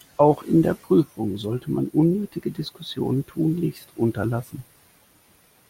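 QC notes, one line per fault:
2.12–3.78 s, drift correction step: the speech abruptly runs 5.7% fast and rises 97 cents, close to a semitone, with speed and pitch shifting together, then snaps back. This is likely a clock-matching resampler stepping its playback rate to rebalance its buffer.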